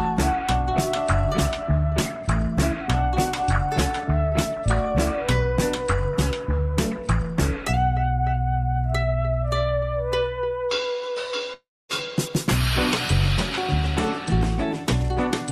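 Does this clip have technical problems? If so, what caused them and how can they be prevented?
Yes. From 11.53 to 11.92 s there is a long network dropout. With nothing arriving, the receiver stretched the last sound into a buzz that fades, followed by 260 ms of near silence, and the audio then resumes with 360 ms lost. That fade into silence, rather than a brief click or warble, separates it from short packet loss. The likely cause is a stall in the connection carrying the stream. A steadier network link or a larger receive buffer would prevent it.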